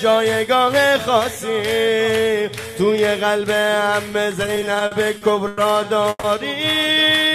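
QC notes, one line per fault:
4.43–5.59 s, repeated stalls (stutter): ten short hold-ups across this span, the longest 100 ms, filling 260 ms in all, about a fifth of the stretch. Each time packets arrived late, the playout buffer ran dry and the receiver extended the last sound until delivery resumed, so the audio drags and jerks without dropping anything. On a spectrogram, short runs of smeared, horizontally repeated frames interrupt the normal texture. The waveform shows looped, decaying segments.
6.09–6.25 s, call audio freeze: the sound halts and is held for 140 ms, tailing off into about 20 ms of silence, then carries on from where it stopped, now running 140 ms later than before. This points to packets likely held up in transit, emptying the jitter buffer while the receiver stretched the last sound. On a spectrogram it appears as a flat, fading smear ending in a blank strip. The waveform shows a repeating, shrinking pattern.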